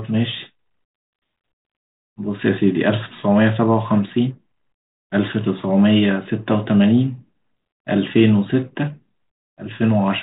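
No technical faults can be heard in this speech.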